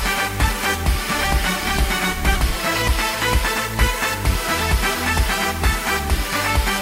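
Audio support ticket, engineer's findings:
Skip ahead at 2.36 s: audio jumps forward with no gap, about a third of a second of material gone, the two sides butted together. Probable component: jitter buffer discarding queued audio on overflow, or loss in transit. Unlike a dropout, there's no silence or fill, just an abrupt splice.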